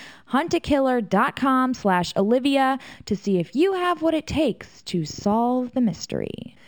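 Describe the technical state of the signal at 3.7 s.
At 3.7 s the speech carries imaging from linear upsampling, present throughout the clip. The rate was raised from 12 kHz to 48 kHz by straight-line interpolation. The top of the band is dulled. A faint mirrored copy sits between 6 kHz and 12 kHz, about 30 dB down. It adds a light metallic shimmer to sibilants.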